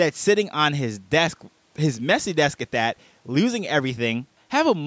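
Nothing stood out on listening to this speech, which carries the expected trimming of the lowest bass from call microphone processing and no content above 8 kHz.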